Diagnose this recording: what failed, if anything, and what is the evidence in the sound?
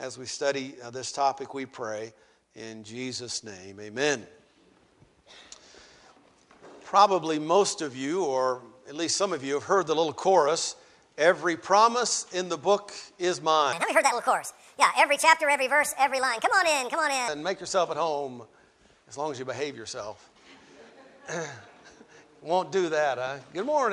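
Wrong sample rate at playback, 13.73 to 17.28 s: sound runs 1.45 times fast and about 6.5 semitones high together, unlike pitch-shifting, which fits 22 kHz material played at 32 kHz.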